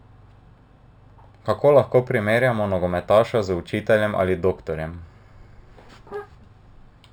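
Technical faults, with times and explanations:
Throughout: imaging from linear upsampling. The speech was brought to a higher rate by straight-line interpolation between samples, which fits a 12 kHz source raised to 48 kHz. That weak filter rolls off the top of the original band below 6 kHz and lets a mirrored copy of the spectrum through between 6 and 12 kHz, roughly 35 dB down, heard as a faint metallic shimmer riding on sibilants.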